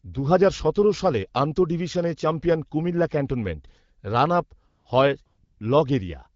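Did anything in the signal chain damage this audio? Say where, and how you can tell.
Yes. At the codec's silence handling, speech frames stop from 4.67 to 4.85 s and from 5.25 to 5.59 s, and AMR comfort noise replaces the real background with smooth, steady synthetic hiss.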